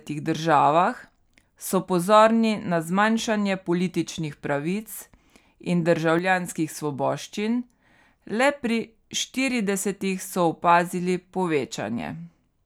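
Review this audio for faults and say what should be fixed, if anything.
A sudden gain jump runs from 6.19 s to 6.49 s. The speech and the background noise drop together by about 6 dB in one step, then return just as abruptly at 6.49 s. The likely cause is a digital gain change applied from one sample to the next with no ramp. On the waveform, the envelope shows a flat-edged rectangular dip. On a spectrogram, the whole frequency range, noise floor included, turns uniformly darker between two sharp vertical edges. To prevent this, apply any gain change through a short smoothing ramp instead of switching it instantly.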